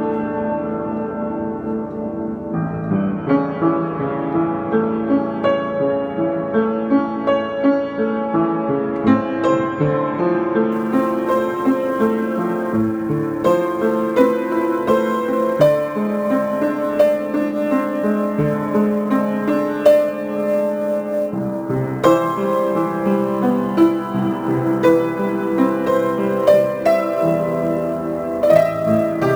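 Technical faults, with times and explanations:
10.72 s to the end: sample clock jitter. Unsteady converter timing, on the order of several microseconds, adds a grainy hiss roughly 30 dB below the sound that swells on loud, bright passages and disappears in silence, unlike a steady background noise floor.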